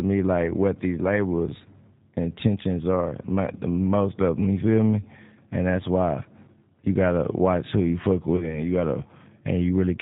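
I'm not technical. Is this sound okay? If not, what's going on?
No. The whole recording has gone through the G.729 codec, a phone-call compressor that rebuilds the voice from a simplified model. Nothing above 4 kHz survives, so it sounds muffled, slightly rough and synthetic. That steady, even roughness is what sets it apart from a bad microphone or a noisy room.

From about 8.36 to 8.60 seconds there is VoIP packet loss concealed by the speech codec. Roughly 30 ms of audio went missing, which fits about three lost frames. The decoder patched the gap by stretching the last bit of voice into a fading buzzy tone or coloured noise, and the speech stays weak and smeared for a short while afterwards. A plain dropout would be silent or a sharp click.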